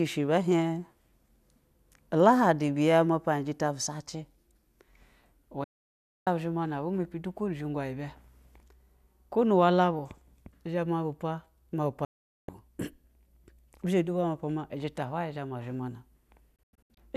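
At 5.64 s the speech cuts to silence until 6.27 s, a digital broadcast dropout: the receiver stopped getting valid frames and muted, so about 0.62 s of programme is gone. The same happens from 12.05 to 12.49 s, and from 16.56 to 16.98 s as scattered holes, the longest 96 ms. Each cut fades in just 3 ms, appearing as blank vertical bands on a spectrogram and flat-line gaps in the waveform.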